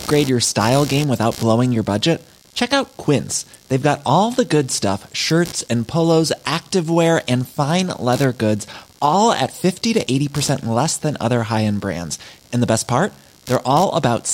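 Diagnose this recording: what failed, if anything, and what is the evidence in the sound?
Computer activity noise, analogue wiring: pulsing noise near 70 per second throughout, about 25 dB below speech, as computer load currents disturb shared ground; spectrogram shows regular vertical streaks.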